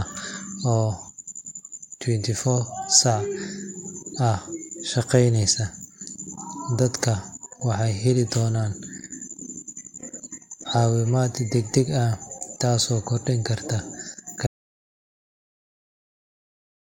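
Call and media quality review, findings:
Audio dropout to silence from 14.47 s to the end: speech cuts out to silence, no room tone. Likely input lost upstream, mic link or mute, recorder kept writing silence.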